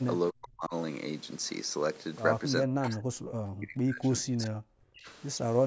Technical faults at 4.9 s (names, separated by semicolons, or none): speech suppressed in double talk